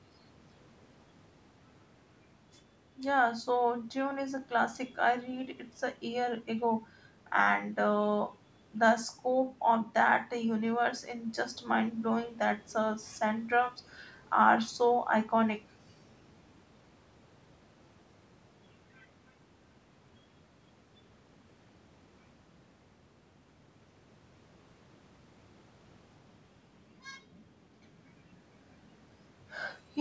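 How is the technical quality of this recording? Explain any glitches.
No glitches or faults heard.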